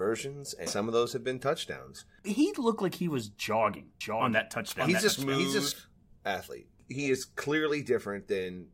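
At 0.66 s there is a brief glitch from damaged data in the compressed stream. Corrupted bytes leave the decoder unable to read a frame correctly, so it loses sync and jumps to the next valid frame header. The result is a short blip in the speech.

From 4.01 s to 5.72 s the speech is heard twice as a doubled audio track. A second full-band copy runs roughly 0.7 s behind the original at about 5 dB lower level, with no reverberant tail or room colouring. It cuts in and out abruptly at both ends of that span. The likely cause is the same signal being mixed in again through a slower path, or an edit that left two misaligned copies stacked.

Inside that doubled section, from 5.08 s to 5.10 s, another burst of corrupted stream data produces a second glitch as the decoder skips ahead and resynchronises.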